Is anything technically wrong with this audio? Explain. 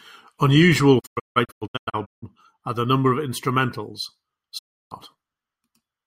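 Yes, there is a digital broadcast dropout twice: from 0.99 to 2.24 s, ending just before "are the number", and from 4.57 to 4.93 s. The receiver lost frames and muted until clean ones returned, so the speech fades out within 20 ms into silence. The first event is scattered holes totalling 0.77 s, the longest 160 ms. The second loses 0.32 s. The missing speech never returns.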